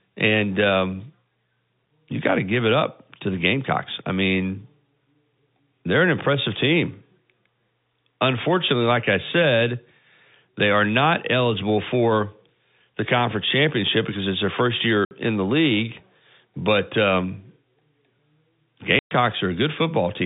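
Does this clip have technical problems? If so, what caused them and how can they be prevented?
Yes. Packet loss filled with silence leaves two dead-silent holes: 60 ms at 15.05 s, between "because it's their first" and "in the league", and 120 ms at 18.99 s. Both lengths are multiples of 10 ms, which fits 10 ms packets. Concealment would smear repeated sound across a gap, but these gaps are empty. A more stable network path plus packet loss concealment at the receiver would prevent this.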